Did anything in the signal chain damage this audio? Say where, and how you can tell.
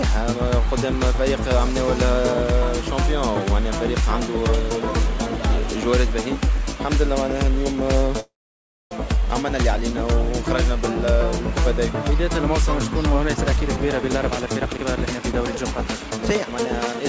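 Yes. At 8.20–8.93 s there is a call audio freeze, likely from packets stalling in the network and draining the jitter buffer. The waveform shows a brief fading tail, then about 0.62 s of flatline.

From 13.33 to 17.01 s a jitter buffer speed-up trims pitch-period slices to shed about 0.7 s of delay. Events crowd together at 118% speed while spectrogram harmonics stay at the same height.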